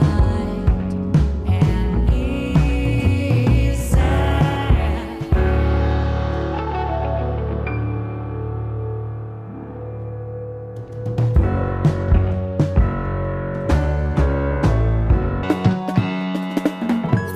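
Audio read two samples at a time (double speed) from 15.43 s to the end: sample pairs are taken as single frames, so the sound runs twice as fast, an octave up.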